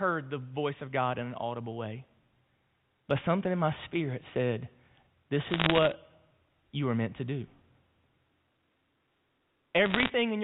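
From 5.50 to 5.92 s and again from 9.86 to 10.10 s, bit errors on the digital phone line flip individual samples, adding sharp crackling ticks over the telephone-band speech.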